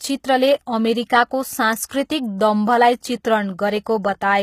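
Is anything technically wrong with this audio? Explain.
Yes, there are two problems. Throughout the speech, the treble sounds gritty and metallic, with lispy s sounds, and nothing reaches above 14.9 kHz. This is likely HE-AAC compression at a low bitrate, around 20 kbps. The upper band is rebuilt from copied lower bands, so its harmonics don't align. A spectrogram shows a hard ceiling and repeated, smeared texture up top.

At 1.89 s there is pre-echo. Codec noise spreads across the block into the silence just before an attack, producing a short hiss about 16 ms ahead of it and a softened onset. On the waveform, low-level fuzz precedes the transient.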